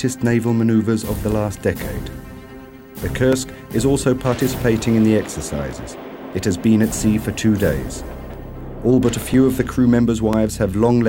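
Something on the system is stalling the USB bus or the audio driver once every second, and each stall loses roughly a couple of milliseconds of audio, which is filled with silence. These periodic USB or driver dropouts run from 0.31 s to 10.34 s, about ten in all, evenly spaced at 1.0 s. Each gap cuts the waveform abruptly, so the sound carries a steady, clock-like tick or small pop once per second.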